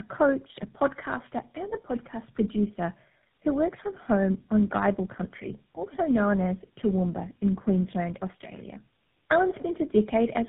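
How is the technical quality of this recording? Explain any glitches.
Quality is poor throughout. Tandem speech coding affects the whole clip. It sounds like three mobile speech codecs in a row, each re-coding the previous one's damage. Speech is rough, warbly and muffled, with nothing above 3.8 kHz.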